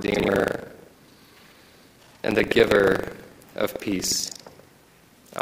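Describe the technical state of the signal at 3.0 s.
At 3.0 s, as throughout the clip, the writer and reader of the ring buffer have slipped and cross inside each period. This is buffer tearing. About a fifth of every buffer replays audio roughly a tenth of a second old between hard joins, producing a steady robotic buzz at 25 Hz whenever sound is present.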